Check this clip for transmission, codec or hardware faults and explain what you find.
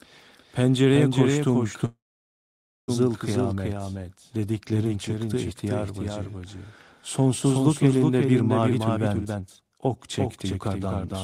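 Three faults are present in this speech clip.

Doubled audio track: throughout, a second full-band copy trails the speech by roughly 0.4 s, about 5 dB quieter and dry, likely from a duplicate capture path.

Call audio freeze: from 1.85 to 2.90 s the sound stalls, a brief fading buzz then about 0.9 s of silence, likely the jitter buffer running empty while packets were held up. Speech resumes intact with "kıyamet dediklerin çıktı ihtiyar", so nothing is lost, only delayed.

Jitter buffer speed-up: after "elinde bir", from 8.62 to 11.15 s, the receiver trims short pitch-period slices repeatedly, removing roughly 0.7 s. Speech runs 130% fast at unchanged pitch and sounds hurried.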